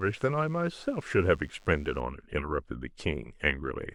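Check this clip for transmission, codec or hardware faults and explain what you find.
From 0.0 to 2.0 s, DECT cordless phone buzz: radio bursts from a nearby DECT handset or base, arriving 100 times a second, get rectified in the audio circuit, leaving a thin 100 Hz buzz with harmonics, well below the speech.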